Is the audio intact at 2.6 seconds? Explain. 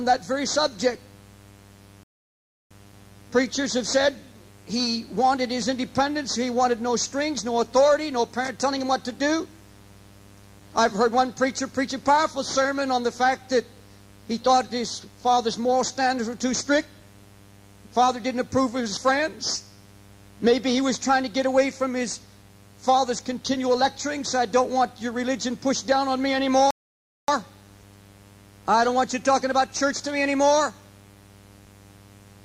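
No. At 2.6 seconds the sound has dropped to silence, part of a gap running from 2.03 to 2.71 s, after which the audio picks up exactly where it broke off. This is a rebuffering stall: playback ran through all the audio it had downloaded and halted until more data came in. Nothing is skipped or lost, but the pause inserts about 0.67 s of extra time into the clip.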